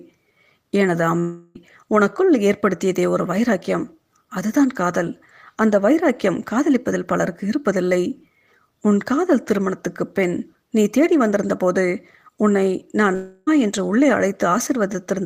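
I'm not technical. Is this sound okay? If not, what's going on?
No. The speech cuts out twice, from 1.19 to 1.57 s and from 13.15 to 13.49 s, each time replaced by a fading buzz for about a third of a second. This is likely a long network dropout: audio stopped arriving, the player stretched the last sound, and that stretch of speech is lost.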